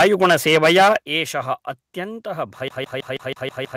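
From 0.00 to 0.96 s the speech has a hard, crackling edge on every loud syllable, the sound of microphone overload. The most likely cause is input gain set so high that peaks ran about 12 dB past the converter's ceiling and had their tops sheared flat. Roughly a sixth of the waveform in this stretch has its tops clipped flat.

At 1.02 s the whole signal, voice and background together, falls abruptly by about 8 dB in a single step. This is a microphone volume step-down, most likely the call software reacting to the overload just before it by cutting the device's input level in one move. The change is instantaneous, with no fade, so the level jumps down at that point instead of easing off.

From 2.68 s to the end of the clip the audio turns into a rapid, even stutter, the signature of a CD stuck on one turn. The same 0.16 s fragment plays seven times in a row, with a brief mute at each jump back, exactly as when a scratch throws the laser back one track per revolution. 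The spacing is perfectly regular, giving a mechanical, machine-gun rhythm.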